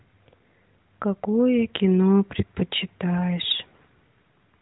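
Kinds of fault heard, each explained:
No faults can be heard in the speech, which carries the light coding character of the AMR narrowband mobile codec, consistent with its 12.2 kbps mode, with nothing passing above about 3.9 kHz.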